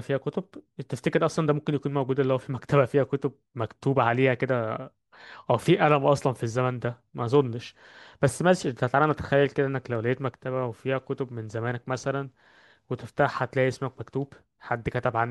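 Nothing in the speech stood out as a fault when listening.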